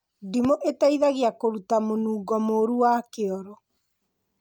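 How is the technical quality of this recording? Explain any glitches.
One glitch spoils the speech recording. From 0.45 to 0.47 s, a loud pop: a voltage spike, likely from a switch, plug or static discharge, hits the signal, giving a sharp pop a few decibels above the speech.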